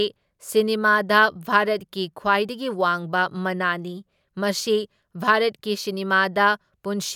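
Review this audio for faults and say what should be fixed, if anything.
Nothing stood out on listening to this speech recording, so there is nothing here that needs fixing.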